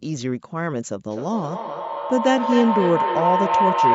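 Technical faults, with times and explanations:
1.1–3.9 s: feedback howl. The microphone-to-loudspeaker loop gains level each pass, building a tone near 1 kHz from repeats roughly every 0.3 s that reaches about speech level.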